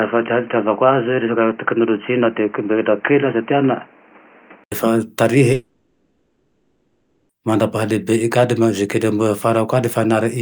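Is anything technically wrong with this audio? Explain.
Yes. Two faults can be heard.

From the start to 4.72 s, the speech is dull and boxy. Nothing comes through above about 3.1 kHz. A faint new background noise sits roughly 30 dB below the speech. The loudness stays about the same. At 4.72 s there is a short silence of 80 ms, and then the full, clear sound returns. This is likely an input switched to a poorer device. A narrow-band microphone or a headset call profile was in use for that first stretch.

From 5.53 s to 7.31 s, there is a long network dropout, likely caused by packets that never arrived. The receiver fills all 1.76 s by stretching out the last sound. It becomes a fading buzz or hiss, with no true silence in between. The speech then resumes at 7.31 s. The 1.76 s of speech from that gap is simply gone.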